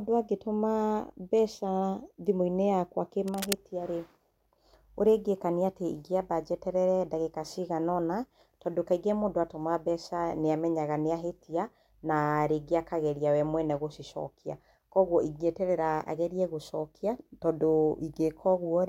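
Speech recording with cable scratch noise from 3.28 to 3.54 s: dense, uneven rustling about 5 dB below the speech, likely a worn connector being moved, unlike a single clean click.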